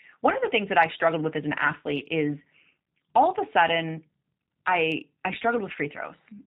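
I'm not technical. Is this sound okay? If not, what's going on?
No. The G.729 codec, a low-rate internet-phone format, is audible throughout the clip. It doesn't send the speech itself. It sends a compact description that the receiving end uses to rebuild the speech. Everything above 4 kHz is lost, so it sounds muffled, rough and synthetic.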